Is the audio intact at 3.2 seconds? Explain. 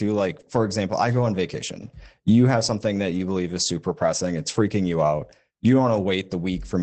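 No, not quite: a lost packet rebuilt from error correction runs from 3.09 to 3.19 s, between "have something" and "believe is super pressing". The next packets carried low-bitrate backup copies, so about 60 ms is played from those rougher, noisier copies instead of dropping out.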